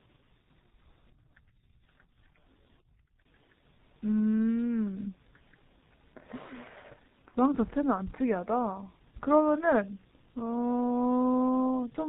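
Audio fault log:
Throughout, G.723.1 codec damage: the speech is heavily muffled and hoarse, with nothing above 4 kHz and consonants smeared together. The 30 ms frames and a rate of about 6.3 kbit/s leave the voice model updating too slowly to track fast articulation.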